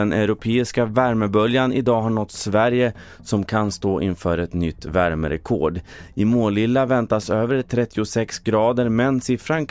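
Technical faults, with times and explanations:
No technical faults can be heard anywhere in the speech recording, and the signal holds steady with nothing breaking into it.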